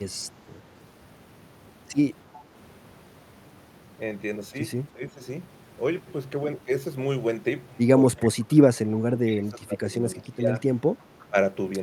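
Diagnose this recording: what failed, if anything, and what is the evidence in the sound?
Two faint echo leaks sit in the call processing. At 2.33–2.42 s and again at 11.2–11.26 s, a short copy of the speech comes back about 345 ms late. It's quiet, roughly 25 to 30 dB under the talker. The likely cause is a far end on a loudspeaker whose echo canceller left some residue in its microphone feed and sent it back down the line.

There's also speech suppressed in double talk, in the same call-processing stage. The talker's level sags or cuts out in pieces at 4.93–5.21 s, 8.21–8.53 s, 8.94–9.89 s, 10.16–10.49 s and briefly at 11.29–11.36 s. The first dip is mild, around 10 dB, the next three go down about 20 dB, and the last about 15 dB. That pattern points to an echo canceller that couldn't tell the near talker from loudspeaker echo while both sides overlapped, and so pulled everything down.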